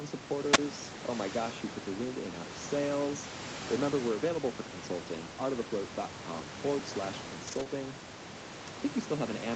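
At 0.52 s a burst of hiss swells briefly, then the audio drops into near silence for about 27 ms before returning. This is a wireless microphone squelch dropout: the FM radio link faded and the receiver's squelch muted its output.

From 7.47 to 7.61 s the sound turns rougher and grainier, with more noise, but there is no gap. This is a lost packet rebuilt from error correction. About 80 ms of audio, which fits four 20 ms packets, went missing. The decoder played the low-bitrate Opus backup copies carried in the following packets.

Right after, from 7.63 to 7.67 s, there is a brief smear where the audio seems to stretch for an instant. This is a short concealed packet loss. About 20 ms never arrived, and the decoder extended the preceding sound for roughly 18 ms before blending back into the real signal. The room noise sits about 12 dB below the speech.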